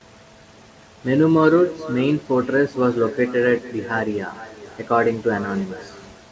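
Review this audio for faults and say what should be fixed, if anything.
Echo with no canceller runs through the whole clip: every phrase returns roughly 0.4 s later as a thinner copy about 16 dB below the speech. The far end's loudspeaker feeds its microphone, and nothing subtracts that signal before it travels back. Enable acoustic echo cancellation on the far-end device, or have that listener use a headset.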